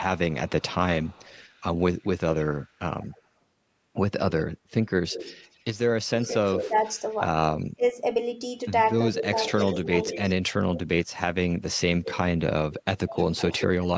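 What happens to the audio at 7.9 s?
The speech drops out briefly between 7.75 and 7.95 s. Within that span, about a tenth of a second is turned down hard, by roughly 30 dB at its deepest, so the voice nearly vanishes in pieces before returning. This is likely speech suppressed in double talk. The echo canceller could not tell the near talker from loudspeaker echo while both sides spoke, so it attenuated everything at once.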